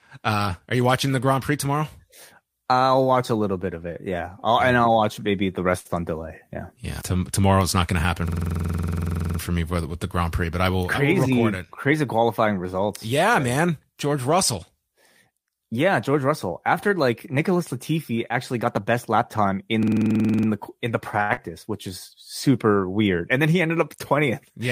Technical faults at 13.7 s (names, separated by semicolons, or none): none